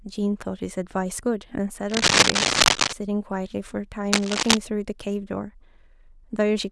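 From 1.89 to 2.93 s and again from 4.12 to 4.57 s, cable scratch noise rustles over the speech, a few decibels louder than it. It is likely a worn connector shifting. It shows as ragged broadband smears on a spectrogram and dense, jagged bursts on the waveform.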